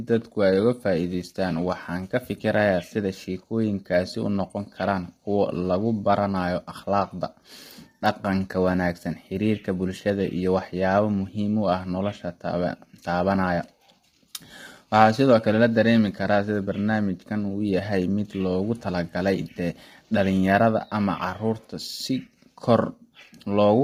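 Throughout the speech, a low-delay AAC compression stage, likely AAC-ELD working with heavy damage at a rate that fits about 24 kbps, uses short frames that resolve the pitch harmonics poorly, so the voice sounds rough and grainy, with noise between harmonics and nothing above 15.6 kHz.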